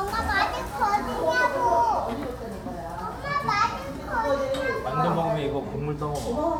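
No technical faults are audible in this recording of sounds.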